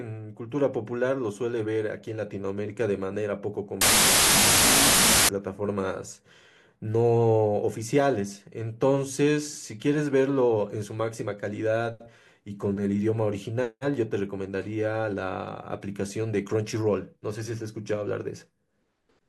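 From 3.81 to 5.29 s the speech collapses into loud, harsh noise with the talker faintly audible underneath, slowed to half speed and an octave low. This is a wrong sample width fault. The halving fits 32-bit samples being read as 16-bit ones: each real sample splits into two values, so only alternate ones carry the signal's top bits. Byte-order errors don't change speed or pitch, and a plain slowdown stays clean.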